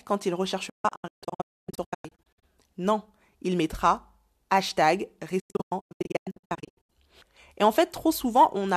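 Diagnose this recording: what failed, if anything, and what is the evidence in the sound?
A digital broadcast dropout at the reception stage. After "quand il", 0.69 to 2.43 s, and again 5.39 to 6.90 s, the speech breaks into short holes with 8 ms fades. The longest hole is 0.26 s in the first burst and 0.1 s in the second. The receiver muted failed frames, which shows as full-band vertical gaps on a spectrogram and flat stretches in the waveform.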